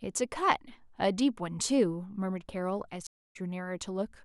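At 3.07 s the speech cuts out for 284 ms. This is a stream reconnect. The connection dropped and the player restarted its decoder mid-stream. At 3.37 s the sound resumes roughly 150 ms further on, so a short stretch is skipped.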